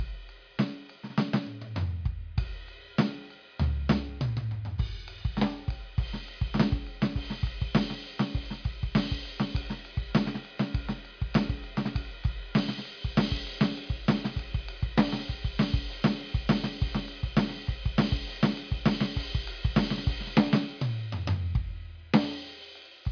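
No faults in this music.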